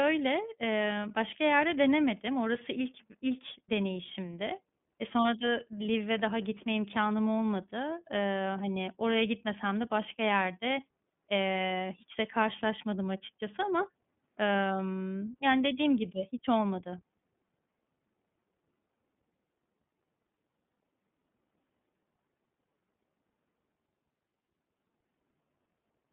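iLBC codec coding runs through this whole speech recording: the band is limited to roughly 150 Hz to 3.5 kHz, and the plainly rough, synthetic texture fits iLBC's 13.33 kbps mode with 30 ms frames. Lost iLBC frames at 13.25 to 13.29 s: a brief held, buzzy vowel-like sound, consistent with a single dropped 30 ms frame concealed by repeating the last pitch cycle, with clean recovery immediately after.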